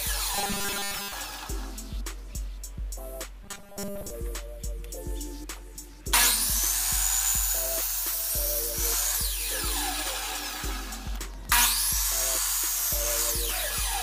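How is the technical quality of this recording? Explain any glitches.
Two stretches of robotic sound from repeated short buffers break the recording, from 0.35 to 1.12 s and again from 3.43 to 4.10 s. In both, the audio collapses into a rigid, metallic buzz pitched at 200 Hz, with most of the real material replaced. The likely cause is new audio arriving too late, so the playback fills the gap by looping the last fragment, which fits a buffer of about 5 ms. It carries a buzz at one fixed rate while still loosely tracking the underlying sound's shape.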